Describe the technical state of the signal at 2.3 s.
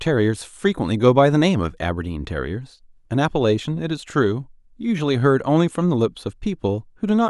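At 2.3 s the signal is intact, with no audible dropout, distortion or other technical fault at that point.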